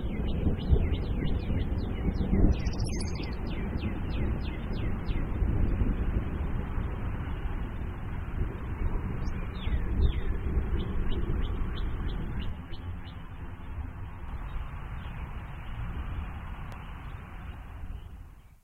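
Channel delay (comb filtering) runs from 12.49 to 14.28 s. One channel arrives around ten milliseconds behind the other, and when the two are folded into mono, their shared content cancels at a regular series of frequencies, the first near 40 Hz and the rest stacked evenly above it. Through this stretch the audio turns hollow and slightly phasey, with a fixed, combed colouring that stays put until the channels realign.

A loud pop occurs from 16.72 to 16.75 s: a single sharp pop sitting roughly 5 dB above the surrounding sound, which carries on underneath it without a break. Its shape fits a brief voltage step or spike, likely from a plug, switch, static discharge or driver glitch, being added to the signal and then rounded off by the circuitry that follows, leaving one short, percussive transient.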